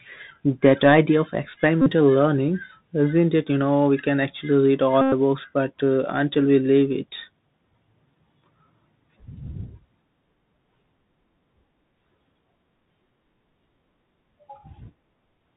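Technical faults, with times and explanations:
Throughout: Bluetooth CVSD headset codec. The speech has been squeezed through the narrowband headset link, so nothing above 4 kHz survives and the top end sounds boxed in. The coder sends a single up-or-down bit per sample at 64 kHz with an adapting step, and the damage is plainly audible: loud bright passages outrun the step and distort, s sounds come out scratchy, and a fine granular hiss sits under the speech.
1.82 to 1.91 s, 5.01 to 5.12 s, and 6.34 s: Bluetooth headset packet repeated. Voice packets between headset and phone dropped out, and the last good packet was decoded again in their place. In the first two runs, roughly 45 ms and 109 ms of audio were replaced, and the repeat cycle of about 3.75 ms turns into a steady buzz near 267 Hz until clean packets resume. The third is a short 7.5 ms gap of two lost packets.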